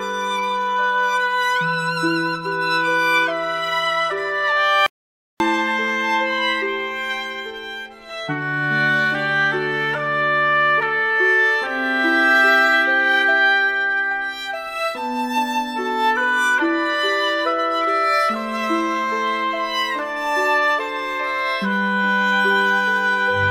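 At 4.86 s the sound cuts off abruptly. What follows is an audio dropout to silence lasting about 0.54 s, until 5.40 s. The gap is silent. No room tone or background hiss remains, so the silence sounds dead rather than quiet. The audio then resumes mid-flow, with nothing from that half second recoverable. The likely cause is a brief loss of the input signal, such as a link failure or momentary mute, while recording carried on writing silence.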